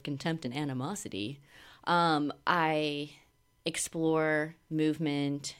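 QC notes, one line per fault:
No faults heard in this speech recording.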